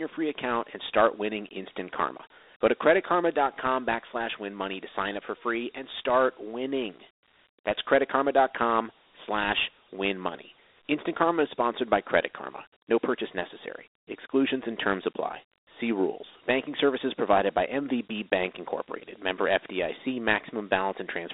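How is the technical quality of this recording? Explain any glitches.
The technical quality is limited by one fault that runs through the whole clip. Dialogic VOX ADPCM coding stores each sample as a 4-bit step from a prediction, which fits a 32 kbps stream at 8,000 samples a second. The speech is held to a 300 Hz to 3.7 kHz phone band, with nothing above 3.8 kHz, and a plainly audible gritty hiss follows it.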